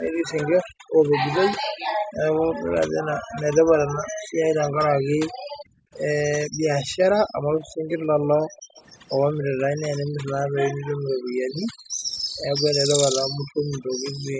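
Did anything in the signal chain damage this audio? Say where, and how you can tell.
Yes. Throughout the 14 seconds, the background sits at near silence with faint twinkling specks, and the quieter parts of the speech are smeared away. This is overdone noise removal in the call processing stage. A noise reducer set far too strong pulls individual frequency bands down or out whenever they come close to its noise estimate, and the softer speech components fall into those bands along with the noise.

The room sound also dips hard at three points, by about 40 dB at its deepest: between 0.64 and 2.74 s, for about a second in total; between 3.99 and 12.34 s, for about four seconds in total; and from 13.26 s to the end. This is background gated by the echo canceller, also in the call processing stage. While far-end audio played on the loudspeaker, the canceller clamped the microphone down, then released it, letting the room sound back in.

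From 7.64 to 8.81 s, a faint delayed copy of the speech trails the original by 289 ms, roughly 25 dB below it. This echo leak likely comes from a far-end speakerphone whose echo canceller did not fully remove what its microphone picked up from the loudspeaker, so a residue was sent back. The band limit at 8 kHz comes from the call's normal microphone processing.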